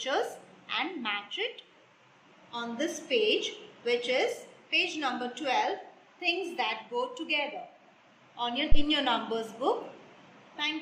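At 8.72 s a phantom power thump arrives: a supply switched on or off on a live input sends a voltage step through the coupling capacitors, giving one deep thump peaking near -9 dBFS that dies away within about 22 ms, ending by 8.82 s. Unlike a handling bump, it is a single clean low-frequency pulse with no rustle around it.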